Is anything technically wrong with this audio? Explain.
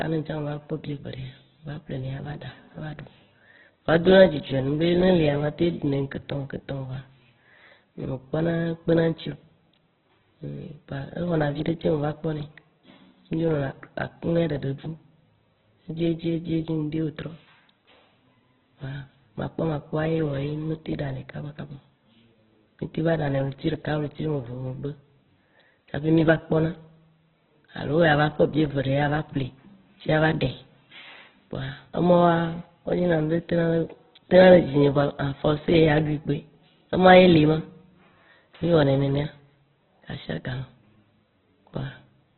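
Yes. Throughout the speech, heavy Opus compression is likely: starved music-mode coding fills bands with grainy noise, and a spectrogram shows nothing above 4.1 kHz, which points to roughly 8 kbps.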